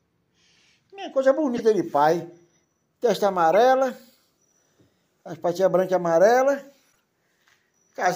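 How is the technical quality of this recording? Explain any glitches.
Three short glitches mar the recording, all from a corrupt frame decoded. Damaged bits in compressed frames were played back anyway, so misread gains and codes put energy at the wrong frequencies for the span of the bad frames. The result is a fairly loud chirpy burst across several frames from 1.56 to 1.60 s, a similar brief blip at 3.53 s, and a much fainter squeak from 6.92 to 7.00 s.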